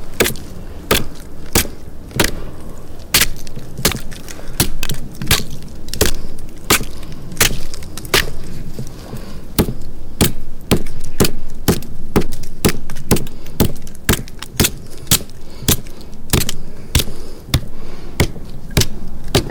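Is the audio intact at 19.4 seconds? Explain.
No. Hard clipping runs through the whole clip, including 19.4 s. The sound is driven about 38 dB past what the signal path can carry, so a few percent of the waveform's peaks are sliced flat, adding high harmonics heard as a harsh fuzz on every loud sound.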